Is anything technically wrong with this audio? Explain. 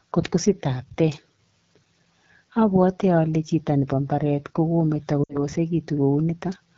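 Yes, two faults. Throughout, the speech carries AMR wideband (HD Voice) codec damage. It sounds rough and raspy, which points to a low rate near 8.85 kbit/s.

From 5.24 to 5.43 s, lost AMR speech frames occur. The decoder repeats the last good settings with falling gain, so the speech drops to near silence within two frames, then returns rough. The gap fits about three lost frames, roughly 60 ms.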